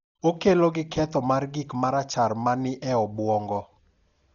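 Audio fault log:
throughout: Dolby Digital compression, likely. The speech is dull, with nothing above 7 kHz and a rough, fluttering noise around voiced tones. The heavy damage fits a very low bitrate near 40 kbps, where the encoder narrows the band and leaves many frequency lines unfunded, which the decoder fills with noise.
0.14 to 4.2 s: clock slip clicks. About ten faint, regular ticks come roughly every half second, each a single sample dropped or repeated. Two unsynchronised clocks, likely differing by a few tens of parts per million, accumulate a whole-sample error at that steady pace.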